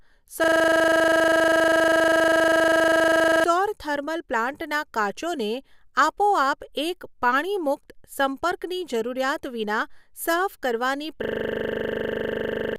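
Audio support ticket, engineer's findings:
System hang loop, 0.44–3.44 s and 11.24–12.76 s (after "જરૂરિયાત વિના સાફ કરવાની"): a 40 ms slice repeating at 25 Hz, a rattly stutter. Computer or driver froze, ring buffer kept cycling. About 3 s and 1.5 s of audio lost.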